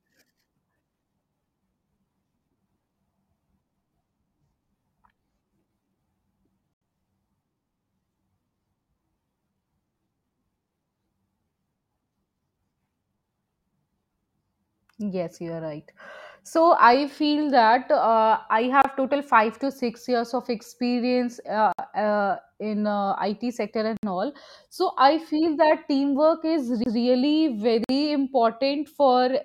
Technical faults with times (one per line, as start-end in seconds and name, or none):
6.74-6.81 Bluetooth stall
18.82-18.84 Bluetooth stall
21.72-21.79 Bluetooth stall
23.97-24.03 Bluetooth stall
26.84-26.86 CD skip
27.84-27.89 Bluetooth stall